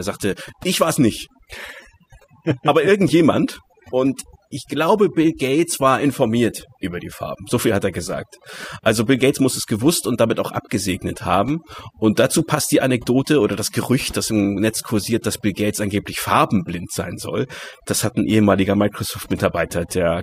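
Overdone noise removal runs through the whole recording, from start to finish. A noise reduction stage has been pushed too hard, so any frequency band that drifts close to its noise estimate is pulled far down or shut off entirely, and the softer parts of the speech get caught along with the noise. The result is a background of near silence dotted with twinkling, chirpy specks.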